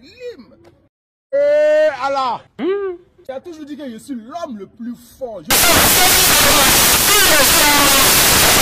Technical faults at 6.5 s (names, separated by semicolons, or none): samples built from the wrong bytes